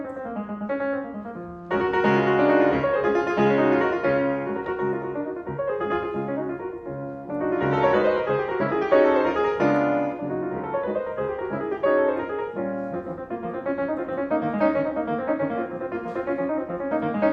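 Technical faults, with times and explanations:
7.50 to 9.50 s, adaptive stream at a lower bitrate: for two seconds playback switched to a much lower-bitrate version as the connection slowed. Codec artefacts rise and nothing remains above 7.4 kHz, which fits a drop from around 96 to 24 kbit/s AAC. Quality changes abruptly, with no gap.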